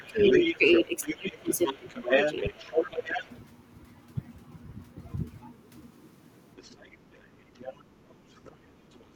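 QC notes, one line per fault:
0.00–3.24 s, speech suppressed in double talk: the talker dips repeatedly, about a second in total, up to roughly 15 dB down. This is likely the echo canceller ducking everything while both sides talk at once.
0.00–3.31 s, other side's voice leaking through: a second voice sits not far under the talker. The likely cause is loudspeaker pickup the canceller didn't fully remove.
6.57–7.81 s, other side's voice leaking through: the same bleed returns, much fainter this time and well under the speech. It is likely residual echo again.
7.18–8.96 s, speech suppressed in double talk: the talker is chopped down again, briefly but harder, with gaps dropping around 25 dB, about half a second in total. It is likely the same double-talk ducking.
8.45–8.51 s, other side's voice leaking through: a tiny, very faint scrap of the far voice, likely a leftover echo fragment.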